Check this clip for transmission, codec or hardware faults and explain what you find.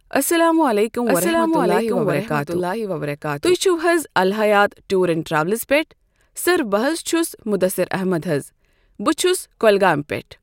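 One fault is present. From 1.06 to 3.54 s a doubled audio track appears: a second copy, a few dB quieter, trails about a second behind, likely from a slower capture path, and shows as a shifted duplicate waveform that starts and stops abruptly.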